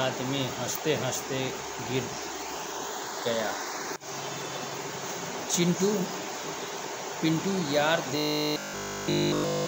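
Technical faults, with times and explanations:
8.18–9.66 s, robotic sound from repeated short buffers: the final stretch of the audio becomes a rigid, metallic buzz pitched at 50 Hz, with essentially every moment in that span made of repeats rather than fresh material. The likely cause is new audio arriving too seldom, so the playback fills each gap by looping the most recent slice, about 20 ms long, while the real signal in between is skipped. That fixed loop length imposes the steady 50 Hz tone.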